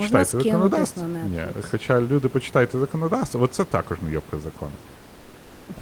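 After "також не йобка закону", from 4.95 to 5.67 s, comfort noise in place of the background, likely from Opus DTX: a featureless hiss about 2 dB quieter, textureless on a spectrogram.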